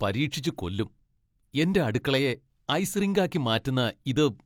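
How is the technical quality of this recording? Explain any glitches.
No glitches or technical faults can be heard anywhere in the recording.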